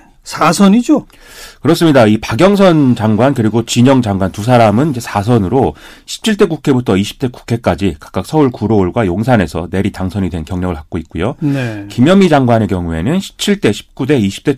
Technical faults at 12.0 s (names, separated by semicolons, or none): hard clipping